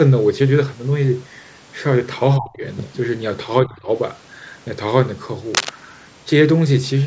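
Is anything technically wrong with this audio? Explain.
Yes. The speech has two kinds of technical fault. It passed through call microphone processing, which leaves nothing above 8 kHz.

From 2.38 to 2.63 s and again from 3.63 to 3.89 s, the speech drops sharply. The first dip is deep, about 25 dB. The second is shallower, about 15 dB. This sounds like speech suppressed in double talk. An echo canceller likely mistook the talker for loudspeaker echo while the far side spoke, and turned the signal down. The talker's speech fades and thins for a quarter second each time.

From 5.54 to 5.70 s, a burst of rough, uneven noise sits over the speech. It is loud, only about 5 dB below the speech. This is cable scratch noise, likely from a worn cable or connector being moved. Its contact resistance jumped around quickly and added crackly bursts. It is heard as a brief scratching or rustle.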